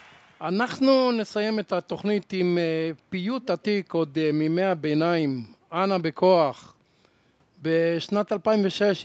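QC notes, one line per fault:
3.42–3.65 s, echo leak: a faint delayed copy of the speech, trailing the original by 131 ms and sitting well below it, surfaces briefly within the call-processed band that tops out at 8 kHz. The likely cause is a far end on loudspeaker whose echo canceller did not fully suppress what its microphone picked up, so a residue of the playback was sent back down the line.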